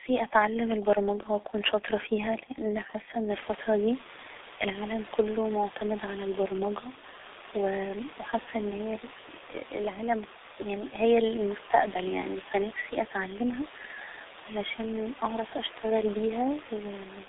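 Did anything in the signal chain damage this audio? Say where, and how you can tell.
Yes, at the codec stage: the whole clip carries heavy G.723.1 codec damage. Speech is muffled and hoarse, with smeared consonants from coarse 30 ms frames at roughly 6 kbit/s. A spectrogram shows energy confined to about 300 Hz to 3.7 kHz. The room noise that rises about 15 dB near 3.5 s belongs to the recording itself.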